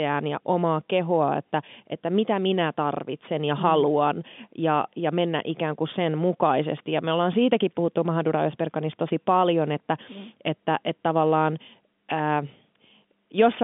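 No faults detected: the speech sits in a normal telephone band of roughly 150 Hz to 3.5 kHz with nothing above 3.7 kHz, consistent with standard 64 kbps G.711 mu-law coding and at most faint codec grain.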